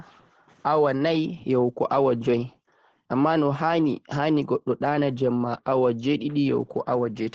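Opus voice compression affects the whole clip. The speech is coded in wideband SILK mode, a linear-prediction coder. Nothing sounds above 9 kHz, so it is muffled. Coarse excitation coding leaves it plainly hoarse and slightly robotic, fitting a bitrate near 12 kbps.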